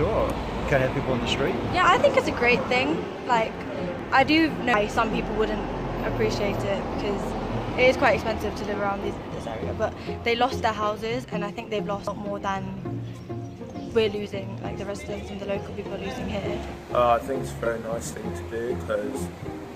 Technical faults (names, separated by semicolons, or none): dropped buffer (overrun)